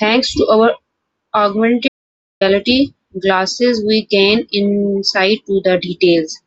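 The input feed was likely lost for about half a second, from 1.88 s to 2.41 s, while recording continued on silence. The result is an audio dropout to silence: the speech cuts off mid-flow into dead digital silence with no room tone, then resumes abruptly.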